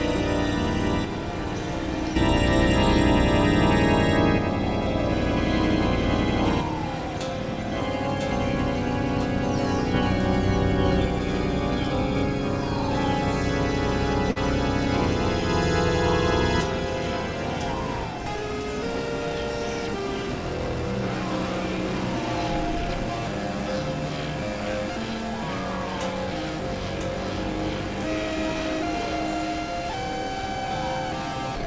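At 14.30 s, running to 14.38 s, there is a burst of packet loss. For about 53 ms the receiver stretches the last sound it had, letting it fade rather than going silent, and then the audio picks up again with roughly 60 ms missing. Unlike a plain dropout, there is no hard gap to silence. Unlike a click or glitch, the sound smears forward before the jump. The call path's G.722 coding leaves nothing above 8 kHz.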